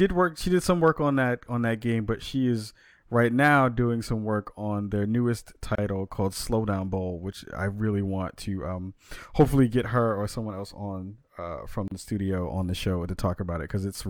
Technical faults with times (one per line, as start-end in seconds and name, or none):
5.75-5.78 gap at a join of encoded pieces
11.88-11.91 gap at a join of encoded pieces